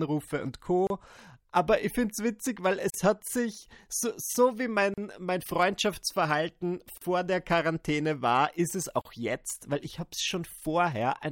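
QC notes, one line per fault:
0.87–0.90 s, 2.90–2.94 s, 4.94–4.98 s, 6.98–7.01 s, 9.01–9.05 s: gap at a join of encoded pieces. The speech was encoded in separate 2.0 s pieces and joined without trimming, so each piece's leading encoder delay and padded final frame remain. A silence of 32 ms at the first join and 38 ms at the rest cuts into continuous speech with smeared edges, for example after "finde es witzig weil" and before "jetzt weil ich habe". Speech then resumes where it broke off.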